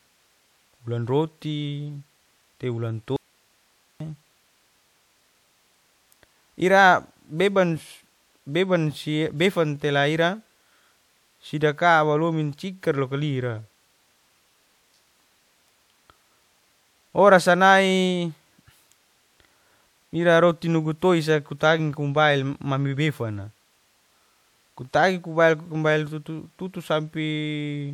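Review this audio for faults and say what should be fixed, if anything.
Right after "te wulan", the speech cuts out abruptly at 3.16 s and returns at 4.00 s, leaving about 840 ms of hiss roughly 40 dB below the speech. This audio dropout to a faint residue is likely a momentary break in the signal feed while the downstream path stayed live. Secure and check the source connection and feed before recording, and monitor for interruptions so the passage can be retaken.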